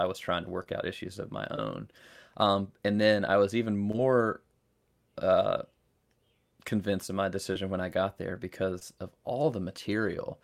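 Short concealed packet loss at 0.63 s (after "was trying to"), 1.56 s, 3.91 s (after "then I was even"), 7.53 s (after "convinced of my") and 8.79 s. Each time, about 20 ms of speech arrived too late and was filled by extending the preceding sound, leaving a brief smear or wobble rather than a silent dropout.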